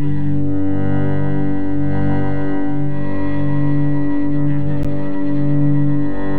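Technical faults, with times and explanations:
Throughout: DC offset. Something in the chain adds a constant voltage, so the whole waveform sits shifted away from zero. It isn't heard as a tone, but it eats into headroom and appears as steady energy at the very lowest end of the spectrum.
4.83 s: Gap between stream segments. Two segments' timestamps don't meet, leaving a hole of roughly 13 ms that the player fills with silence. The sound cuts out abruptly and resumes with equally hard edges, a brief dropout in which nothing is actually lost.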